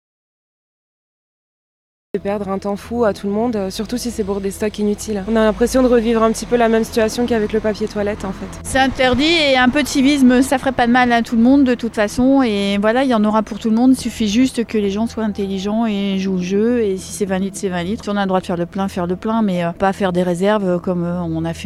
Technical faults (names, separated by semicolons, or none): audio dropout to silence